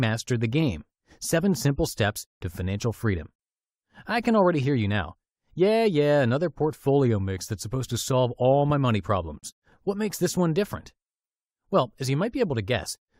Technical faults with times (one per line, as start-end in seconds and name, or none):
9.39-9.43 gap at a join of encoded pieces